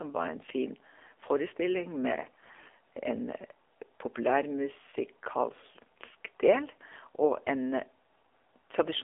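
Throughout, the speech has been through the AMR narrowband mobile codec (AMR-NB). The line is confined to roughly 300 Hz to 3.5 kHz, with nothing above 4 kHz. At this low bitrate, consistent with the 7.4 kbps mode, the codec rebuilds speech from a vocal-tract model fed by a few pulses per subframe, so the damage is plainly audible. Voiced sounds come out buzzy and synthetic.

From 2.22 s to 2.71 s there is a burst of AMR bit errors. Over that half second the voice holds its pitch and level, but it turns hoarse, scratchy and gargly. The span fits about 25 consecutive 20 ms frames, hit at a bit error rate of around 5 percent, with less protected bits flipped. Those bits set the excitation pulse positions and the finer pitch, gain and spectral values, so the decoder builds distorted speech instead of dropping the frames.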